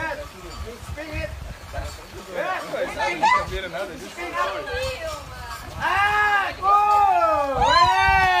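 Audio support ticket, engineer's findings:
No audible faults found; nothing to escalate.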